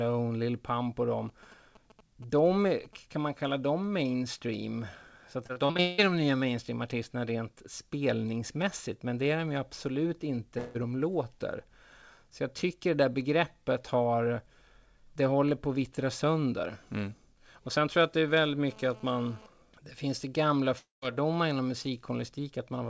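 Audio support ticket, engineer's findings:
GSM signalling bursts, 1.29–2.95 s: nearby 2G handset signalling, its RF rectified in the audio circuit. Galloping ticks and short 217 Hz buzz bursts, roughly 25 dB under the speech.

Repeated packet loss (robotic sound), 5.44–6.00 s: recurring lost or late packets, each hole patched by extending prior audio. Choppy speech; more than half the span concealed, longest hole about 0.18 s.

Long network dropout, 10.58–10.77 s and 20.79–21.04 s: likely extended network outage. Fading buzz fill over the loss; the second adds about 0.16 s of silence. Speech resumes with a chunk missing.

GSM phone buzz, 18.28–19.46 s: 2G handset data transfer, 217 Hz burst pulses rectified into audio. Harsh, harmonic-rich rasp about 25 dB below speech, coming and going. Heard within the G.722 band, nothing above 8 kHz.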